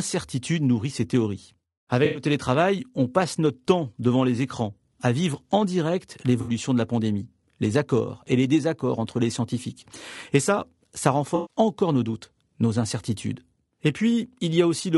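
Throughout the speech, the coding is low-delay AAC compression, likely AAC-ELD at a rate around 32 kbps. Its very short frames can't resolve the pitch harmonics cleanly and leave few bits to spend, so the damage is plainly audible: voices come across rough and grainy, noise fills the gaps between harmonics, and the upper band sounds dulled or synthetic.

AAC frame loss with concealment then strikes three times. Chunks of coded audio never reached the decoder, which patched each gap by reusing the last good spectrum with altered phase or interpolated energy. From 2.05 to 2.23 s about 100 ms is rebuilt this way, from 6.41 to 6.51 s about 60 ms, and from 11.35 to 11.56 s about 140 ms. Each patch sounds smeared, noisy or phasey.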